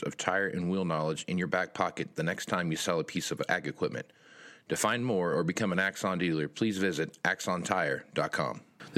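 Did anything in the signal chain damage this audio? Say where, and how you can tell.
No, nothing in the chain from capture through playback audibly damaged this speech recording, and no stage points to a fault.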